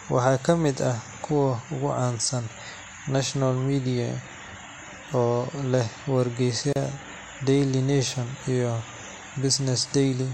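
At 6.73 to 6.76 s the speech drops out for about 32 ms: a gap at a join of encoded pieces. The audio appears to have been encoded in separate segments of roughly 10 s and then concatenated without trimming, so the encoder's start-up delay and the padding of the final frame remain as silence at the seam. The result is a brief hole with smeared edges, after which the speech resumes exactly where it left off.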